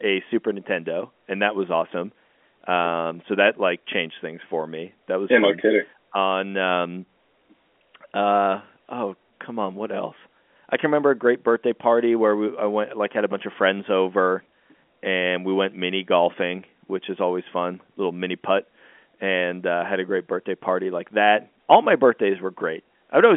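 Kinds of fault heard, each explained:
No faults heard.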